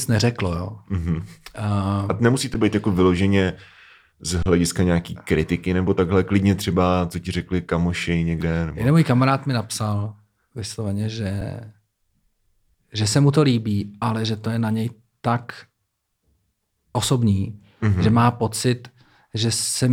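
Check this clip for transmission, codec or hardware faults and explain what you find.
The output buffer ran dry three times, an underrun with held sample each time. The converter froze on its last value until data arrived, so the waveform flattens and the speech briefly stalls. It happens at 2.54 s before "být jako vyloženě" (about 11 ms, which fits a 512-sample buffer), at 4.43 to 4.46 s before "nějaký kritiky nebo takhle" (32 ms), and at 11.41 s after "kamarád mi napsal vysloveně" (about 5 ms). Nothing was skipped, so each gap ends softly.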